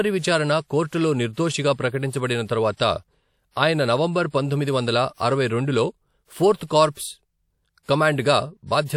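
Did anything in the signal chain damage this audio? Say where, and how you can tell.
Yes. The codec stage left pre-echo at 7.83 to 7.88 s. A short hiss runs 56 ms ahead of a sharp attack, which sounds softened. Quantisation noise sized for the loud onset spread across the whole transform block. A spectrogram shows a broadband smudge before the onset's vertical edge.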